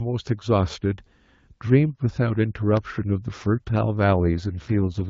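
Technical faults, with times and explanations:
4.33 to 5.09 s, AMR rate drop: For the final stretch the speech turns rough, raspy and synthetic. The band stays the same width and nothing drops out. The change points to the AMR-WB link falling from about 12.65 kbit/s, where the HD Voice codec sounds only lightly coded, to its lowest 6.6 kbit/s mode. Fewer bits describe the vocal tract and its pulses, so the voice loses detail and smoothness. The rate does not recover before the clip ends.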